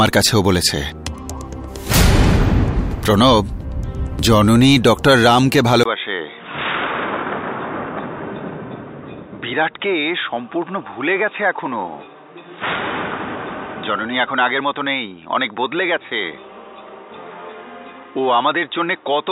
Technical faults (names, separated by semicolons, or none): input switched to a poorer device